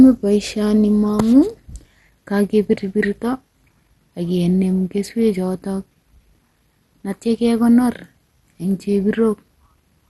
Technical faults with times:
0.00-10.10 MP2 compression

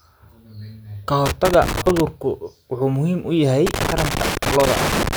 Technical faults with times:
1.26-2.00 loose connector crackle
3.66-5.16 loose connector crackle

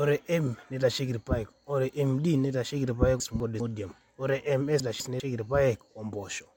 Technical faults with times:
3.20-3.60 chunks out of order
4.80-5.20 chunks out of order

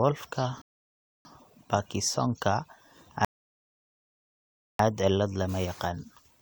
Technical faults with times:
0.62-1.25 rebuffering stall
3.25-4.79 rebuffering stall

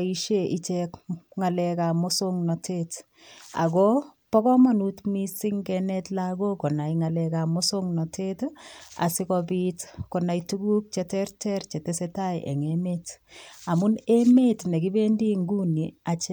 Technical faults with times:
none

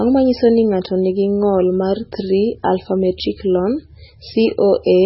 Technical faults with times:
0.00-5.05 MP3 compression

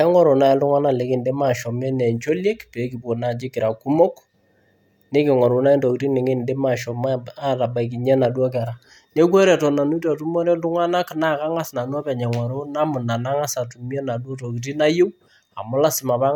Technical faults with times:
none

